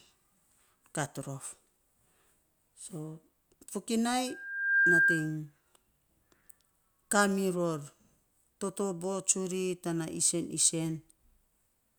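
From 4.27 to 5.37 s a pure 1.6 kHz tone swells over about half a second into a squeal well above the speech. This is loudspeaker feedback squeal: the microphone picked up its own loudspeaker, and the loop gain at that frequency exceeded one.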